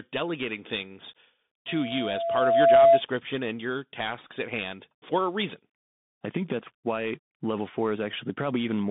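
Bluetooth CVSD headset codec runs throughout: the one-bit delta coding, which fits a 64 kbps link, cuts everything above 3.8 kHz, leaving a scratchy, granular-hissing narrowband speech. Loudspeaker feedback squeal follows "delegating things" from 1.68 to 3.02 s: the mic-speaker loop howls at 674 Hz, swelling over about a second to well above the speech, ending before "and your tasks at".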